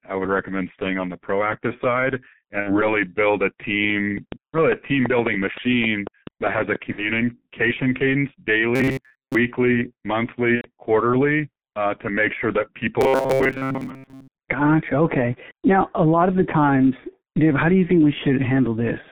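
Throughout, the speech carries heavy G.723.1 codec damage. At about 6.3 kbit/s the coder keeps only a 150 Hz to 3.6 kHz band and updates its vocal-tract model slowly, so the voice sounds muffled and hoarse, with smeared consonants.

From 2.60 to 2.82 s and 6.92 to 7.12 s, VoIP packet loss concealed by the speech codec turns the sound into a fading buzzy tone or coloured noise that stays weak for a while after recovery. Each gap fits two lost 30 ms frames, which the decoder bridged by extrapolating its last pitch and filter.

From 8.76 to 9.35 s, robotic sound from repeated short buffers gives a rigid, metallic 133 Hz buzz that loosely follows the speech. The likely cause is late audio being replaced by repeats of a roughly 7.5 ms buffer, with most of the real signal skipped.

From 10.56 to 10.70 s, packet loss concealment returns. The gap fits three lost frames, about 90 ms. The sound dissolves into a decaying buzzy tone or coloured noise, muted from the third lost frame, before the speech comes back distorted.

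From 13.01 to 14.28 s, the same robotic buffer-repeat fault recurs. A fixed 133 Hz metallic buzz is imposed over the speech for over a second.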